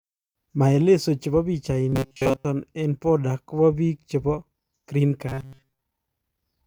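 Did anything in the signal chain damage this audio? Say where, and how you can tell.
Yes. From 1.89 to 2.45 s, just before "eng border kopa biik", and again from 5.28 to 5.82 s, the speech becomes a rigid metallic buzz fixed at 134 Hz. This is robotic sound from repeated short buffers, likely at the driver or buffer stage, where a 7.5 ms chunk loops in place of most of the audio.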